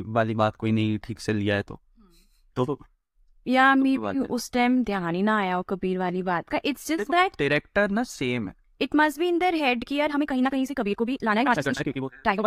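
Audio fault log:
10.09–12.47 s time-stretched section: the speech abruptly runs 1.76 times faster at unchanged pitch, sounding rushed, likely from software dropping short slices to shorten it.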